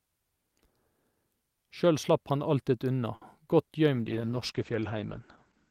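At 3.15 s a sound is held too long, stretched for about 60 ms until 3.23 s with a slight buzz or dip, before the speech picks up from exactly where it stopped. This is a short stall from a late packet: the next chunk of audio had not arrived, the jitter buffer ran dry, and the receiver filled the gap by extending the last sound. Nothing is lost, but everything after plays 60 ms later.

From 3.95 s to the end the speech turns rough and watery, and muffled, as the top end disappears above about 8 kHz where it previously reached up to 20 kHz. This is a call bitrate drop: the bandwidth estimate collapsed, so the encoder went from 64 kbps to 10 kbps, coding far more coarsely and trimming high frequencies. It stays at that low rate for the final 1.76 s without recovering.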